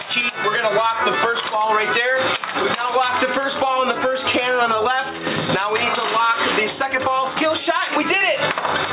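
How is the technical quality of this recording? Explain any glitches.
The main problem is gain pumping, and it runs the whole way through. The gain swings by something like 10 dB, pulled down each time a loud sound lands, so loud and soft parts sit squashed close together. The likely cause is input gain set far too hot with a fast limiter or compressor clamping down on each peak. Nothing comes through above 4 kHz, which fits a narrowband call codec such as G.711.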